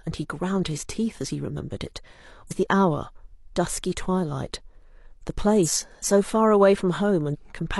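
Compressed frames skipped at 2.47–2.51 s, 5.62–5.69 s and 7.29–7.36 s: whole blocks of the coded speech never reach the output, so the audio jumps forward, by roughly 50 ms, then 100 ms, then 150 ms. Those steps fit losing one, two and three frames of about 46 ms each. At each join a small piece of speech is missing.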